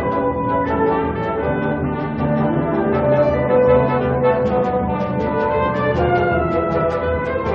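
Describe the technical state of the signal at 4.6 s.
At 4.6 s the signal is intact, with no audible fault at that moment.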